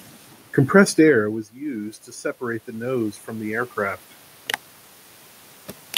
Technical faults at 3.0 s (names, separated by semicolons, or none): automatic gain rising